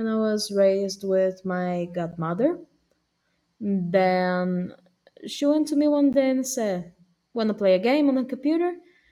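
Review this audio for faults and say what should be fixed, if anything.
Two gaps between chunks interrupt the speech, at 2.11 s and 6.13 s. Each is a hole of about 13 ms, and they fall exactly 4.0 s apart, which points to the audio being delivered in 4-second chunks with a short stretch of silence inserted at each join. Nothing is dropped; the sound simply stops and restarts. To prevent it, concatenate chunks sample-accurately, trimming any codec padding or pre-buffering playback.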